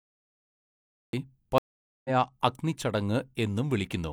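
The speech begins with a cut-off start: from 0 to 1.13 s there is only digital silence, then the sound appears abruptly mid-syllable with no natural attack. On a waveform this is a flat line jumping straight into the signal; a spectrogram shows a hard vertical edge.

At 1.58 s a stream reconnect breaks in. The connection dropped, leaving about 0.46 s of silence, and by 2.10 s a fresh decoder has resumed the speech roughly half a second later than where it stopped. Visually, it is a blank gap followed by content that does not continue the preceding contours.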